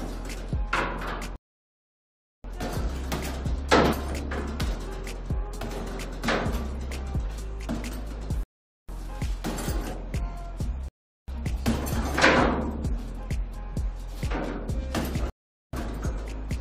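At 1.36 s the sound drops to silence for about 1.08 s before picking up again at 2.44 s. Shorter gaps follow at 8.43 to 8.89 s (0.45 s), 10.88 to 11.28 s (0.40 s) and 15.30 to 15.73 s (0.43 s). Each is a rebuffering stall: playback starved for data, halted, then resumed exactly where it left off, adding time without losing content. On a waveform these appear as flat near-silent stretches; a spectrogram shows clean blank columns with sharp edges.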